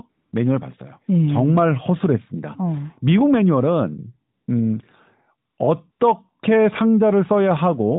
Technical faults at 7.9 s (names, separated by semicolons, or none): none